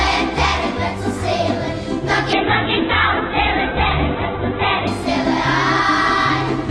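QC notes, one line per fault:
2.34–4.95 s, call bitrate drop: the bandwidth estimate collapsed and the encoder was pushed from about 48 kbps down to about 7 kbps, holding at that floor for roughly 2.55 s. With so few bits the codec quantises coarsely and narrows the coded band from 20 kHz to 4 kHz, so the sound turns muffled and dull, with a rough, watery texture, until the rate climbs back near 4.95 s.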